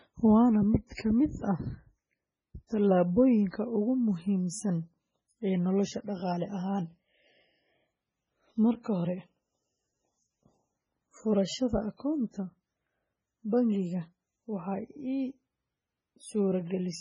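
Speech, damaged from start to finish. Nothing sounds above 10.5 kHz. Weak detail flickers in and out, so the sound turns watery and swirly, with chirpy s sounds and smeared onsets. The likely cause is heavy MP3 compression, fitting a bitrate near 16 kbps.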